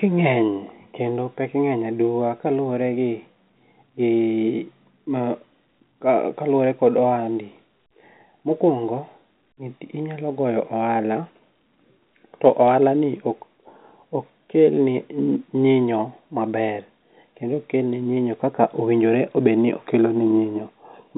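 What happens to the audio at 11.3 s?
Nothing goes wrong at 11.3 s. The speech carries on intact there, limited only by the narrow band of its G.711 telephone coding, which passes nothing above 4 kHz.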